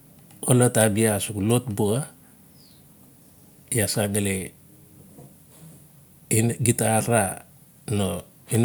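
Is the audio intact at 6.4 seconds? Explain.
Yes, at 6.4 seconds the audio is intact, with no dropout, click, distortion or other fault to be heard.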